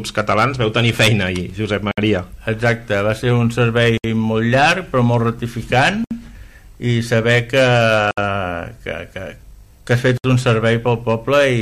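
Short dropouts of silence cut into the continuous sound at 1.91–1.98, 3.98–4.04, 6.04–6.11, 8.11–8.18 and 10.18–10.24 s, each about 63–67 ms long and recurring every 2 seconds. Their edges are smeared by the codec, and the sound resumes exactly where it left off. This is a gap at a join of encoded pieces: separately encoded segments were joined without removing each one's leading encoder delay and final-frame padding.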